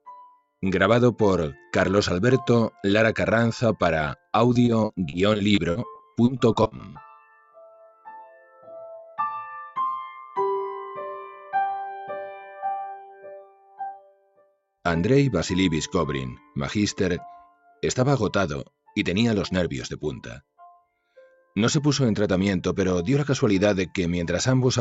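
What you're hearing is a speech-tuned noise suppressor left running on non-speech audio. It keeps treating sustained content and tails as noise, so the level breathes up and down by a few dB the whole way through, with attacks getting through while held sound sinks and thins. In places it pulls sound down sharply. The worst dips are about 19 dB at 0.3–0.47 s and again at 13.42–14.59 s, with smaller ones of about 13 dB at 7.2–8.08 s and about 11 dB at 8.25–8.69 s and 17.54–17.82 s. Separately, from 4.53 to 6.97 s there's repeated packet loss giving that robotic, choppy sound: roughly twenty little holes, none longer than about 40 ms, each patched by stretching the previous bit, so about a fifth of that stretch is filler. Everything sits inside the call path's band, topping out around 8 kHz.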